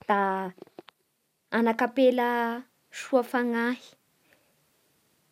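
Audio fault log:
No faults were heard in this speech recording. Nothing in it calls for an entry.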